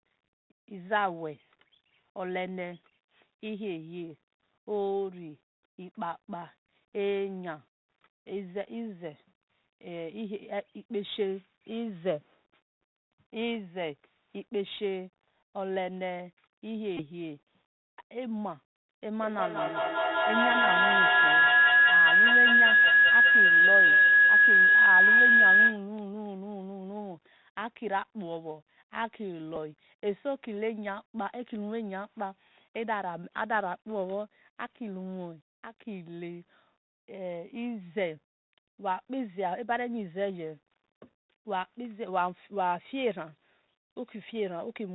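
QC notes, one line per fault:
Throughout: Bluetooth CVSD headset codec. Dull, boxy sound with scratchy s sounds and a granular hiss; the one-bit 64 kbps stream passes nothing above 4 kHz.
16.97–17.03 s and 29.56 s: Bluetooth headset packet repeated. A short buzz near 267 Hz, then a briefer one. Lost packets were replayed every 3.75 ms, about five the first time and two the second.
19.09–25.93 s: feedback howl. A tone around 1.5 kHz swells to about 12 dB over the speech, with the loop repeating roughly every 0.2 s, as the speaker-to-microphone loop keeps gaining.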